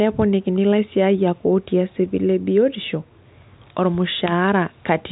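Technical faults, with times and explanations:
Nothing here counts as a fault; the speech comes through a G.726 ADPCM link at 40 kbit/s, which keeps it within the usual telephone band topping out near 3.8 kHz.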